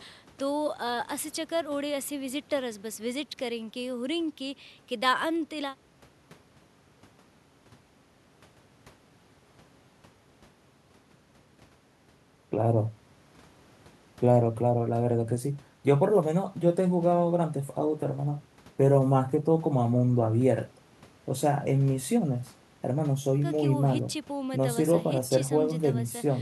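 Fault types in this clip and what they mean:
No technical faults can be heard anywhere in the speech recording; playback is continuous throughout.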